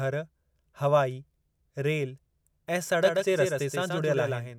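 A speech recording that carries a doubled audio track from 3.03 s, just after "हवाई रेल ऐं", through to the end. From there a second full-band copy of the speech runs around 150 ms behind the first, about 5 dB quieter. It switches on abruptly. It is a single copy with no tail or room colour, which sets it apart from an echo or reverb that would decay and colour the sound. The likely cause is a second, slower capture path mixed in alongside the original.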